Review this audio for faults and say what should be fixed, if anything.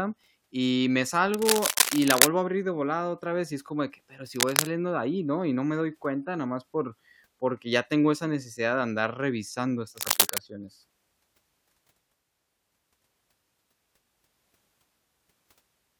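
Cable scratch noise appears three times in this speech: 1.34–2.27 s (after "y me", before "a abrir de volada"), 4.36–4.67 s (after "como de que pero"), and 9.96–10.40 s (after "necesidad de andar revisando"). The bursts are dense, uneven crackling, roughly as loud as the speech, likely from a worn cable or connector shifting. Replacing or reseating the cable and securing it against movement should prevent it.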